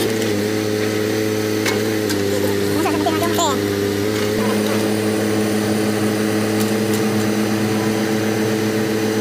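From 2.07 to 4.04 s the sound drops about a semitone and slows by 5.4%, then snaps back: a drift correction step, likely clock-matching software adjusting playback rate.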